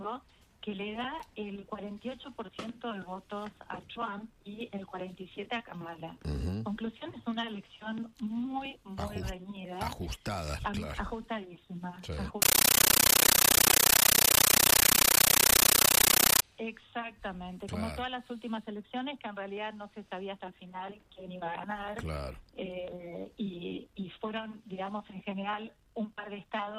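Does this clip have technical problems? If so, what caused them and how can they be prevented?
Yes. From 12.42 to 16.42 s there is a compressed stream played as audio. An AC-3 bitstream, which fits 640 kbps Dolby Digital, reached the output undecoded and was treated as ordinary samples. Each frame became a 13.3 ms noise burst followed by silence, repeating 31.25 times a second, heard as loud chattering static. To prevent it, set the source to PCM output or send the stream to a device that decodes it.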